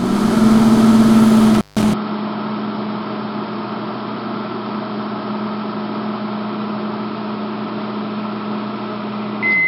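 Intermittent contact strikes this recording of everyday sound between 1.54 and 1.83 s. A loose plug or cable connection briefly separates, so the signal drops out for about 158 ms with crackle at the moments the contact breaks and remakes. While the line is open, only faint hiss remains. The gap is abrupt rather than faded, which is what distinguishes a physical contact fault from a deliberate mute or a gain change.

An input switched to a poorer device takes over at 1.94 s and lasts to the end of the clip. It is most likely caused by the system swapping to another microphone or a headset profile. There is no silence at the change-over. Nothing is heard above 5.4 kHz, so the sound turns dull and boxy. The level falls by roughly 10 dB, and a new background noise appears around 40 dB below the signal.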